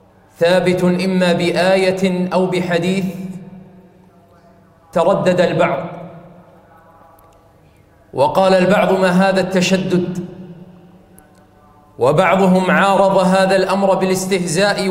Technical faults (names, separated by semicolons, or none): none